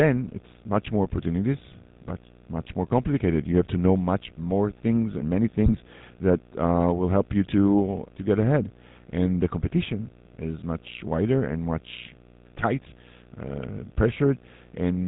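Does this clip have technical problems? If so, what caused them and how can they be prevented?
Yes. A video or display buzz sits under the speech for the whole clip. It is a hum with a 60 Hz fundamental, which is the picture's field rate, and it carries hash above it at about 30 dB below the speech. The display or video cable is coupling into the audio path. Mains hum has a smooth tone, but this buzz is rough and gritty and tracks the video timing. The fix is to route video cables away from audio lines, use balanced connections, and break any ground loop between the screen and the audio gear.

The speech also passes through the GSM full-rate codec throughout, and the damage is plainly audible. The codec models the vocal tract and drives it with sparse, regularly spaced excitation pulses at about 13 kbps. Nothing above 4 kHz survives, and the speech takes on a buzzy, gravelly roughness. A plain band-limited phone line would sound dull but smooth, without this grain. 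It can be prevented by recording from a wideband source, or by using a modern wideband codec instead of the old full-rate GSM path.

GSM bit errors break the speech three times. The first is from 2.08 to 2.13 s, between "it's much more opportunities" and "much more complicated you". The second and longest is from 5.66 to 5.81 s, between "more things and many" and "that uh will help". The third is from 12.59 to 12.65 s, just after "much wider and much". Each one is a squawk or gargling pop. Corrupted filter, pitch or gain values reach the decoder, so the spectrum bends or the level jumps for three to seven frames. Packet-loss dropouts go silent or smeared, but these bursts are loud and distorted. Keeping a strong radio link, or capturing the audio before it crosses the cellular channel, prevents them.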